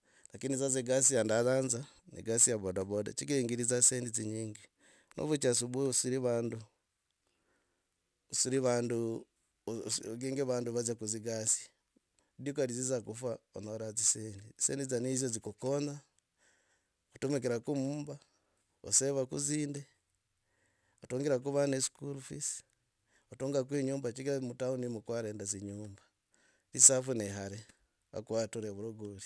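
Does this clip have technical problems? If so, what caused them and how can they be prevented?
Yes. The speech runs through with aliasing: the sample rate was reduced without an anti-aliasing filter, which fits a conversion from 44.1 kHz to 22 kHz, so content above the new 11 kHz limit folded back down into the audible band as false, unrelated frequencies. Sibilants sound gritty and metallic, with the folded energy sitting roughly 25 dB below the signal, and the spectrum stays dense right up to 11 kHz. Low-pass filtering below the new half-rate before downsampling, or using a proper resampler, prevents it.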